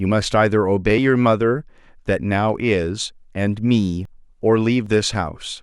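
A speech recording with two abrupt skips near its end, at 4.05 s and again at 4.86 s. At each one the sound jumps forward with no gap of silence, as though a sliver of audio had been cut out and the edges butted together. The first skip loses roughly 40 ms, the second about half that. The likely cause is a dropped buffer (overrun), where the recording software fell behind and the hardware overwrote unread samples.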